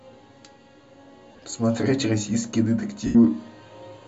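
At 1.32 to 1.46 s the speech dissolves into a brief grainy, hissy smear. These are lost LE Audio frames: about 82 ms of audio is missing, scattered across 135 ms in short runs, the longest around 30 ms, which fits the 7.5 ms frame size. The decoder fills each gap by replaying the last spectrum with scrambled signs, so the holes sound like noise, not the silence or clicks of a plain dropout. A second loss at 3.06 to 3.16 s sounds the same.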